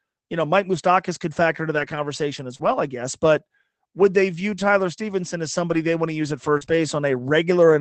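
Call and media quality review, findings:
Lost packet rebuilt from error correction. Rough, noisier patches with no gap at 1.75–1.97 s after "could factor into", 2.59–2.73 s, 5.69–5.75 s, 6.61 s and 6.68–6.75 s. Opus decoder played the low-bitrate redundant copies carried in the following packets.

Short concealed packet loss. Brief smears and wobbles at 2.55–2.61 s before "I guess", 6.57–6.77 s after "want to use at" with slight added delay, and 6.65–6.68 s. Receiver extrapolated the last sound across 40 ms, 40 ms and 20 ms holes. Audio sits within an 8 kHz band.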